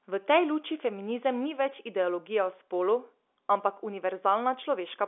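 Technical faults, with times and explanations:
No technical faults occur, so there are no times or explanations to give.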